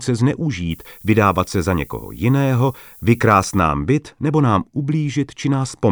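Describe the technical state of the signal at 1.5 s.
At 1.5 s the speech sits under a steady, thin hiss that grows much brighter toward the top of the band. This is low bit depth with noise shaping, running from 0.71 s to 3.61 s and ending just before "byt nebo nám". The signal is held to about 8 bits, and the rounding error is fed back and pushed upward in frequency, leaving a noise floor only around 25 dB below the speech.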